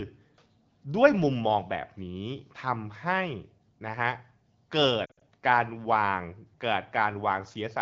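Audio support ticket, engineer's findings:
Lost AMR speech frames, 5.05–5.23 s: short warbly dropouts, sound dips, then recovers a bit rough. Radio errors failing frame checksums, decoder concealing with repeated parameters and fading gain; gaps scattered, longest about 60 ms, so it drops to near silence. AMR wideband (HD Voice) path sounds clear, consistent with a 12.65 kbit/s or higher mode.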